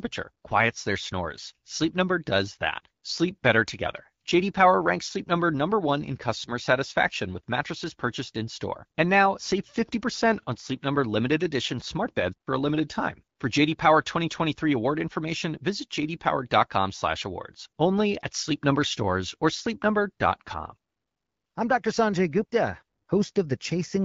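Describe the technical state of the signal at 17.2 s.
At 17.2 s the speech is intact, with no fault, only the clear, 7 kHz-limited sound of the AMR wideband (HD Voice) codec running at 12.65 kbit/s.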